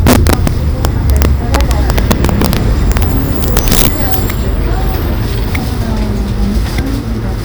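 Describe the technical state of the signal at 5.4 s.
At 5.4 s the signal is intact, with no dropout, distortion, glitch or other technical fault audible at that point.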